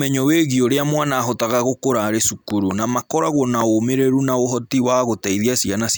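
At 2.50 to 2.73 s, two loud pops land in quick succession on top of the speech. They peak about 10 dB above it. At 3.61 to 3.63 s a single loud pop follows, roughly 15 dB above the speech. Each is a sudden electrical step or pulse, likely from a plug, switch, static discharge or driver glitch, added to the signal. The speech carries on underneath each thump.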